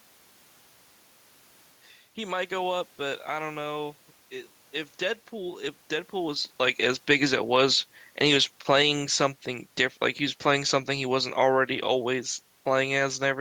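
Speech, with the automatic gain falling twice. The gain control judged the input too loud, or its background noise too strong, and eased its gain down. From 6.17 to 9.37 s the level sinks by about 5 dB, then from 10.4 to 13.36 s by about 3 dB. The room noise sinks with it.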